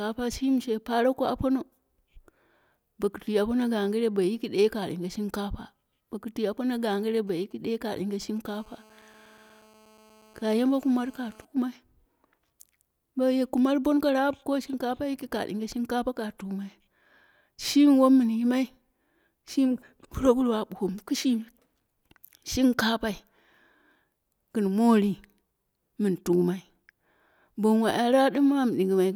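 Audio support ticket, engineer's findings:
GSM signalling bursts, 7.27 to 8.38 s. Galloping dit-dit-dit ticks and short buzzes at 217 Hz, roughly 30 dB under the speech. A nearby 2G handset sends brief radio burst groups. The input stage rectifies them into audio.

GSM phone buzz, 8.45 to 11.45 s. Hard, raspy 217 Hz buzz, rich in harmonics, steady, about 31 dB below the speech, unrelated to it. A nearby handset is now in a call, bursting continuously, demodulated in the audio circuit.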